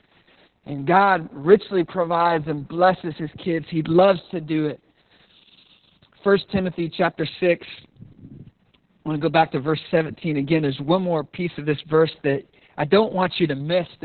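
Throughout the whole clip the speech sounds muffled, hoarse and faintly robotic, with nothing audible above about 4.2 kHz. This is Opus voice compression working hard. The narrow band and the coarse rasp fit a very low bitrate of around 6 kbps. At that rate the codec drops to narrowband SILK linear prediction, keeping only the lowest part of the spectrum and coding the excitation roughly, so the damage is heavy and constant.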